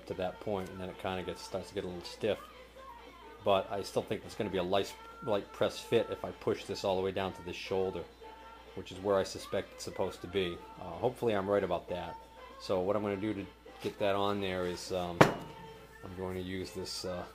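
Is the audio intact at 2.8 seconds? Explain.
Yes, the audio is intact at 2.8 seconds, with no dropout, click, distortion or other fault at that moment.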